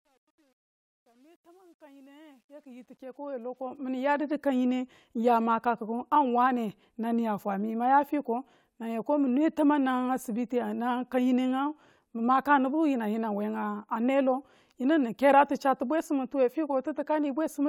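From 0.0 to 4.36 s, the speech fades in with truncation distortion. The fade stage keeps only about 10 bits and adds no dither. At low levels the waveform collapses into a few coarse steps. The opening sounds gritty and grainy. It is worst from 0.0 to 2.89 s, where the sound is faintest. The grit eases as the fade rises smoothly to full level at 4.36 s.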